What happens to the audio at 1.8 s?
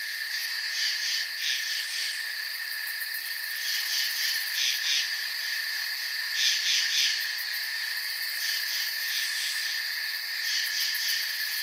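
At 1.8 s you're inside a jitter buffer speed-up that runs from about 1.65 to 3.55 s. The receiver had too much audio queued, so it kept snipping out pitch-period-sized bits, around a tenth of a second in all. The sound plays about 5% faster with the pitch unchanged, a little hurried.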